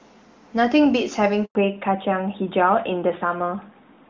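At 1.45 s the call was handed from one network to another, and no speech frames got through while the link switched over. The result is a handover gap: the speech falls away within a few tens of milliseconds and the line sits silent for 100 ms, until 1.55 s, when the new connection begins carrying audio. Whatever was said in that stretch is simply missing, leaving an abrupt hole in the speech.

From 1.55 s to the end, the call is no longer carried on the AMR wideband (HD Voice) codec. Before the gap that codec sounds clean, consistent with its top 23.85 kbit/s mode. After the handover, the connection shows a fallback to narrowband, onto an older narrowband codec whose sound fits AMR-NB at 12.2 kbit/s. Nothing above 4 kHz survives. The speech loses its airy top and crisp consonants, and sounds duller, boxier and rougher.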